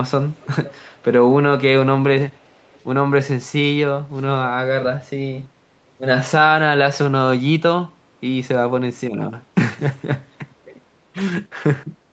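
From 0.35 to 1.03 s, a faint delayed copy of the speech trails the original by about 0.33 s. This is an echo leak, likely from a far end on loudspeaker whose echo canceller let part of its microphone pickup return. The copy sits roughly 25 dB under the speech. It returns from 2.3 to 2.81 s with the same delay, now weaker, around 35 dB down. Both scraps are brief.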